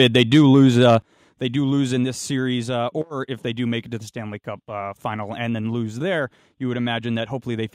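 From the start to 0.93 s the loudest syllables crackle and sound harsh, likely microphone overload, with peaks about 3 dB past the converter's limit and a small fraction of samples flattened. Then the level drops abruptly at 1.02 s by about 8 dB and again at 2.04 s by about 2 dB, likely the microphone volume being stepped down by the call software.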